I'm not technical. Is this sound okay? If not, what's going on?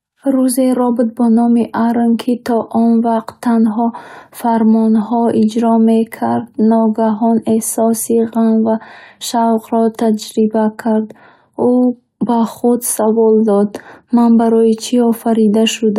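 Yes, this sound is okay, and there's nothing going on with it that needs fixing.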